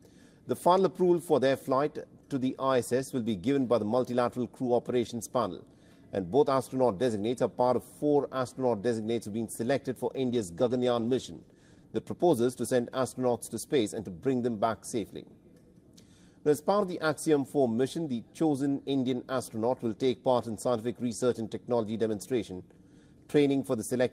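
Around 10.17 s there's a call bitrate drop that lasts until about 11.93 s. The connection's bandwidth estimate fell, so the encoder was squeezed onto far fewer bits, which fits a cut from roughly 32 kbps down to 16 kbps, holding at the bottom for about 1.7 s. With that little to work with, the sound gets coarser and rougher, and the top end thins out until the bitrate climbs back.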